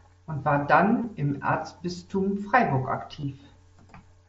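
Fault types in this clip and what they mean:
concealed Bluetooth headset packet loss: missing headset voice packets were patched with repeated recent waveform, giving brief buzzy patches at 1.02 s after "und war" and 3.21–3.23 s.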